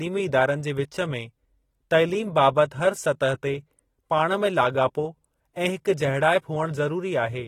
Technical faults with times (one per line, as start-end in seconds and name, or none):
0.00-7.47 AAC compression